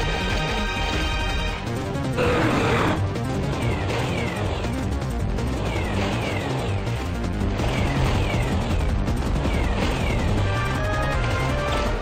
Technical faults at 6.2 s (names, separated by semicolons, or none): none